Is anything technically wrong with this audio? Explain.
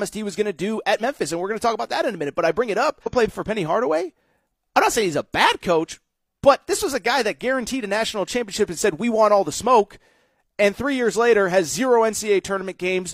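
Yes. At about 3.02 to 3.07 s the speech jumps abruptly forward with a brief blip, and the continuity breaks. This is most likely a stream segment skipped: one segment of the segmented stream failed to load, so the player moved straight on to the next, and that stretch of programme never plays. A dropout would leave a gap of silence and then resume where it stopped. Here nothing stops; the audio simply lands later than it should.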